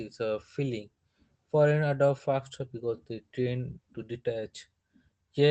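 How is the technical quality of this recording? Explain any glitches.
There's a timing problem running through the whole thing, heard over a call path whose top end stops around 8 kHz.

Clock drift between sender and receiver: the sending side's clock runs roughly 3 percent slow, so the receiver's jitter buffer keeps draining. That lag is there from start to finish and sets up everything else you hear.

Repeated timing corrections: from 0.27 s to 5.41 s, the receiver keeps padding the speech with tiny repeated bits to cover the shortfall, about 150 ms added overall. Playback sits at 97 percent speed, so it comes across as slightly dragged, with small uneven hiccups in the pacing.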